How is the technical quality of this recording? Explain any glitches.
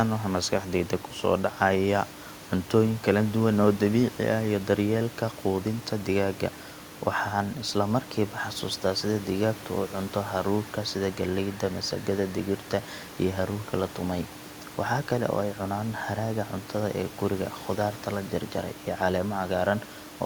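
Nothing stood out on listening to this speech recording beyond a low room noise sitting about 17 dB below the speech.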